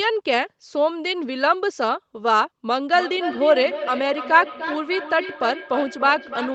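From 2.93 s to the end, the speech comes back as thin, ringing copies roughly every third of a second, the loudest about 10 dB below the direct sound. This is feedback echo between two devices: one replays the other's microphone, which picks it up again, beyond either echo canceller's reach.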